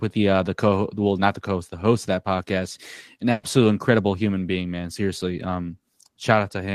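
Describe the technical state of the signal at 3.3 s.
A burst of packet loss from 3.31 to 3.45 s, after "of that podcast an": about 120 ms of audio never arrived. The receiver extended the last sound, fading it as a held buzz or hiss, then resumed at "incredible human being man".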